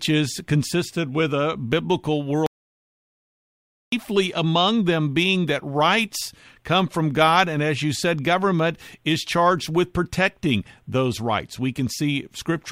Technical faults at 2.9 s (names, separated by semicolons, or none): audio dropout to silence